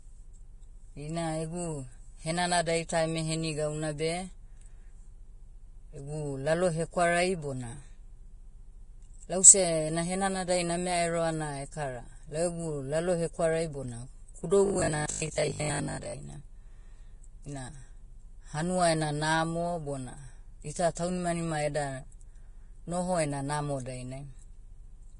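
The whole clip carries heavy damage, likely from Vorbis compression at roughly 29 kbps. Nothing survives above 10.6 kHz, and the treble comes out hissy and grainy.

From 14.66 to 16.18 s the speech turns into a rigid metallic buzz at 50 Hz. That's robotic sound from repeated short buffers, likely 20 ms chunks looping while most of the real audio gets skipped.

There's pre-echo from 15.06 to 15.09 s and again at 20.95 s. Block-spread codec noise puts a short hiss of 32 ms, then 18 ms, ahead of each attack and softens it.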